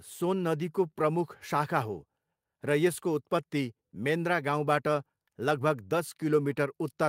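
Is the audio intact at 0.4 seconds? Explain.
Yes, the speech at 0.4 seconds is intact, with no dropout, glitch or distortion at that moment.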